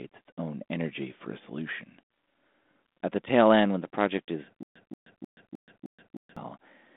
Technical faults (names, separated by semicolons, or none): stutter with silent gaps